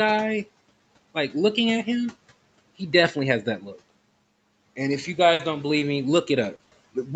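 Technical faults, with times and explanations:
5.33–5.41 s, burst of packet loss: just after "if you", packets were lost or arrived too late to play. The receiver stretched the last sound for about 60 ms and faded it, leaving a held buzz or fading hiss before the audio resumes with that stretch missing.
5.79–6.73 s, short concealed packet loss: at 5.79, 6.55, 6.63 and 6.69 s, 20 to 40 ms of audio missed the decoder. Each hole was filled by continuing the preceding sound and then blending back into the real signal, heard as brief smears or wobbles bunched toward the end.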